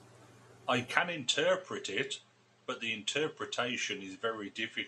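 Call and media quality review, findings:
Input switched to a poorer device, 0.98 s to end of clip. Abrupt dulling, nothing above 8.4 kHz, level down about 5 dB, faint new noise floor, no gap at changeover. Likely capture path rerouted to a narrower-band microphone mid-recording.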